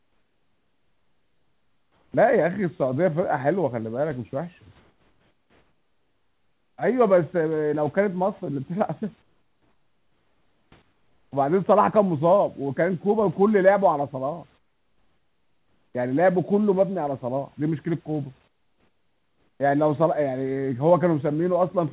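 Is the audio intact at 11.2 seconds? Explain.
No. From 10.82 to 11.32 s the room background drops out and a steady, featureless hiss about 9 dB quieter fills the gap. This is likely comfort noise in place of the background: transmission paused during silence, and the receiver synthesised a rough stand-in for the noise.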